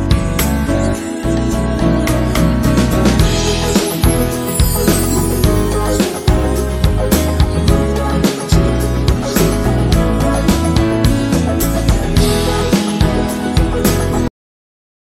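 At 14.28 s the audio has a cut-off end: the sound stops mid-event instead of fading out, because the final stretch of buffered audio was never written out or played. There is no decay or tail, just an abrupt jump to digital silence that lasts the remaining 0.77 s or so. On a waveform the signal ends in a vertical edge, followed by a flat line at zero. A spectrogram shows the energy ending in a hard vertical wall, with blank black after it.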